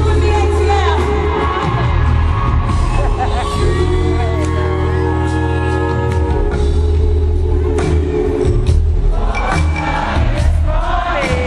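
Nothing in this recording trips any alarm, since no dropouts, clicks, distortion or other technical faults turn up anywhere along the way.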